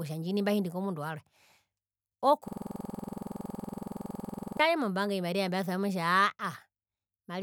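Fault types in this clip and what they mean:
System hang loop: the speech freezes from 2.48 to 4.60 s. A 46 ms slice repeats 46 times, giving a 21.5 Hz stutter, which fits a 2048-sample buffer.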